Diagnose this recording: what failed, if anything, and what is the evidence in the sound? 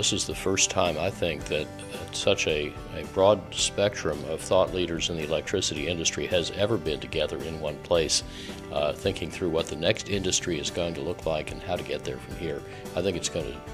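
Nothing stood out on listening to this recording that would point to a failure at any stage of the chain.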